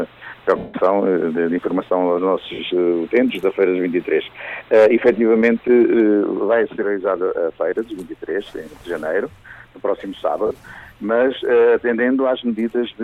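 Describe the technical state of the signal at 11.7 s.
At 11.7 s the signal is intact, with no fault to be heard at that moment.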